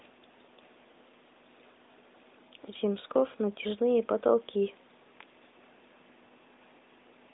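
No technical faults can be heard in this speech recording.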